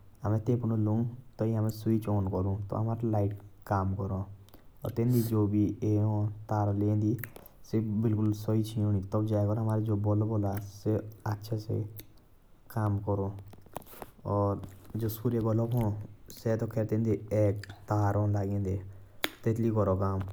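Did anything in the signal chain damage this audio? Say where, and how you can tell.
Yes, at the playback stage, from a CD. CD scratch ticks appear: four brief ticks between 8.26 and 8.74 s, spaced about six per second. Each is well under a millisecond. A surface scratch defeats error correction once per revolution, so the player conceals damaged samples.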